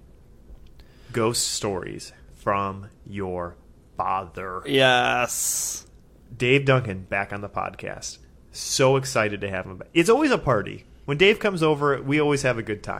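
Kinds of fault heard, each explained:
Nothing to flag in this speech recording: no dropouts, glitches or other technical problems show up anywhere in it.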